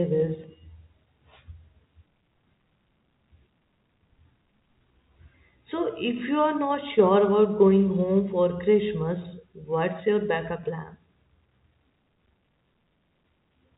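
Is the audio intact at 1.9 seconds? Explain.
Yes, the audio is intact at 1.9 seconds: there is no fault there, only the steady band limit of G.711 telephone coding, which passes nothing above about 3.8 kHz.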